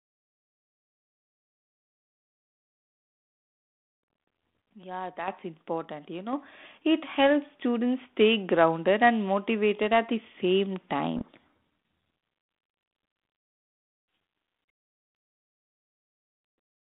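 At 5.28 s, 6.33 s and 10.41 s the level jumps abruptly. This is the microphone volume stepped up. The call software judged the input too quiet and raised the device gain in single steps, by about 8, 5 and 2 dB. Voice and background rise together. The second step lands just before "it helps students stay". The third comes right after "and motivated at the".

From 11.16 s to 11.43 s the speech is buried in harsh distortion. This is a codec payload misread. The receiver unpacked the G.726 code words with their bit order reversed, so each frame looked valid but decoded wrongly. The narrowband 32 kbit/s G.726 line, passing roughly 200 Hz to 3.6 kHz, carries the sound before and after.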